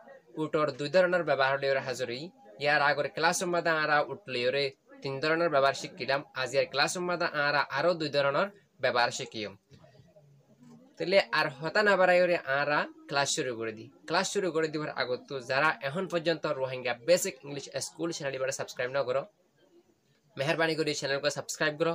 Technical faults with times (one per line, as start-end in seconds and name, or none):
none